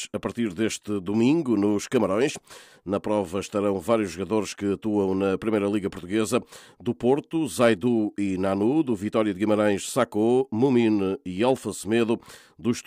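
A brief harsh crackle cuts through a peak at 7.61 to 7.70 s, and a shorter, milder one follows at 11.49 to 11.51 s. Both are hard clipping: the signal ran about 4 dB, then about 2 dB, past what a stage could pass, so the peaks were sliced flat. Those squared-off tops add harmonics high up the spectrum, which is why the peaks sound gritty rather than simply loud.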